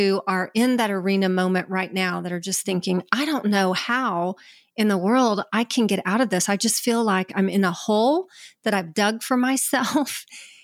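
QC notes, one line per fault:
No technical faults turn up anywhere in this speech recording.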